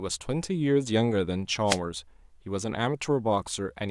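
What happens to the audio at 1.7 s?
Right there you get a wireless microphone noise hit, 1.66 to 1.78 s: the FM signal fades, receiver noise swells, and a quick burst of static swishes over the speech.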